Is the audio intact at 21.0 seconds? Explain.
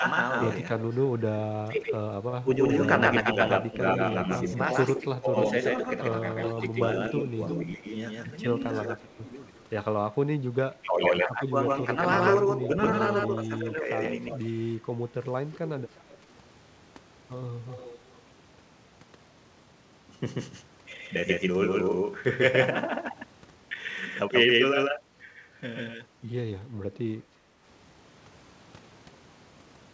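No. A doubled audio track runs throughout, including at 21.0 s: an equally loud, dry copy trails about 150 ms behind, likely from a second, slower capture path.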